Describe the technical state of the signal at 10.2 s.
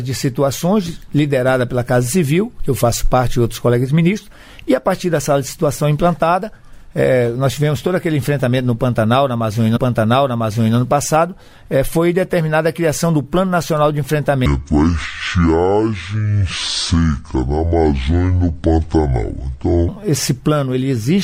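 At 10.2 s the audio is inside a stream segment repeated fault, running from 9.75 to 10.75 s. The player fetched or queued one segment twice, so about 1.0 s of material replays once, with a small blip at the jump back, unlike a stutter's rapid short loops.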